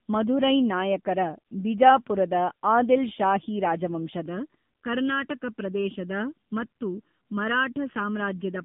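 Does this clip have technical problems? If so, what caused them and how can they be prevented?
Yes. The whole clip went through the AMR narrowband mobile codec: nothing above 3.7 kHz survives, and the plainly buzzy, synthetic speech fits a low mode near 7.4 kbps. To prevent it, record locally or use a wideband call path.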